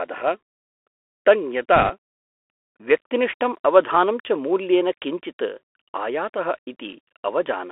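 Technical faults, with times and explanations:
Throughout: Bluetooth CVSD headset codec. Speech is confined to roughly 300 Hz–3.4 kHz, with granular hiss, scratchy s sounds and slope distortion where loud high content outruns the adaptive step.
1.76–1.90 s: bit errors on a Bluetooth voice link. A brief rushing crackle over the speech, consistent with an error rate of a few percent; flipped CVSD bits decay quickly, so no sharp clicks.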